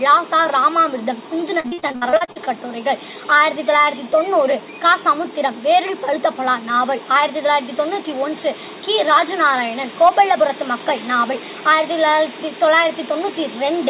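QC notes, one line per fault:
1.6–2.46 s, repeated packet loss (robotic sound): the audio turns choppy, with pieces missing. Around a dozen short holes, none longer than 57 ms, are patched by stretching the last sound, so about half of this span is concealment rather than real audio.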